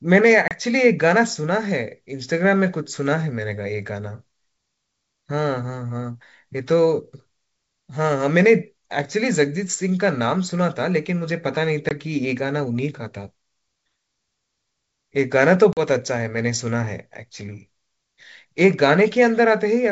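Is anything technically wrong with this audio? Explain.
Yes. The speech has three short dropouts from packet loss on an ADPCM call, at 0.48 to 0.55 s, 11.89 to 11.91 s and 15.73 to 15.82 s. They remove about 30 ms, 20 ms and 40 ms of audio, which points to a few packets lost each time. Each gap is filled with silence and has abrupt edges. Because the decoder's adaptive predictor and step size lose track of the sender's, speech resumes with slight distortion, then settles within some tens of milliseconds. Underneath, the G.722 wideband coding carries the speech cleanly up to about 7 kHz with at most faint coding damage, consistent with 64 kbit/s operation.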